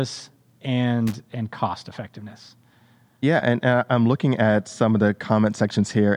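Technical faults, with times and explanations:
1.07–1.15 s, loose connector crackle: a worn or dirty contact briefly makes and breaks, chopping the speech signal into an irregular scratchy burst.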